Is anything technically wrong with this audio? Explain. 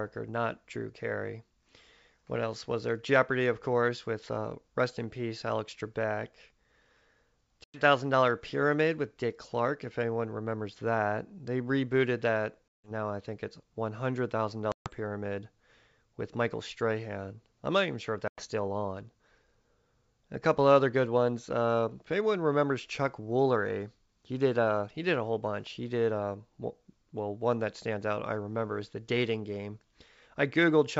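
Yes. There is packet loss on an ADPCM call at 7.64–7.82 s, before "thousand dollar pyramid with", and at 12.70–12.91 s, between "rebooted that" and "now I think it's". It recurs at 14.72–14.89 s, after "it's one hundred thousand", and at 18.28–18.45 s. Each drop cuts 100 to 160 ms of sound, which points to several packets lost at a time. The gaps are silent and hard-edged. Afterwards the decoder's predictor and step size no longer match the sender's. The returning speech is briefly distorted until they realign. This happens over the G.722 wideband link, which itself carries faint or no coding damage.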